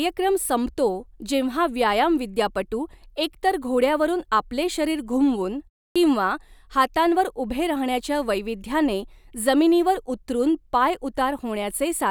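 Clipped start after a pause at 5.91 to 5.96 s: after "आपले शरीर घुमवून" and a pause of about 0.3 s, the next word bursts out of silence with its opening sounds missing, roughly 46 ms swallowed. The playback device appears to have dropped into a low-power state during that short gap and needed a moment to wake and lock again before it could output sound, so the onset was lost.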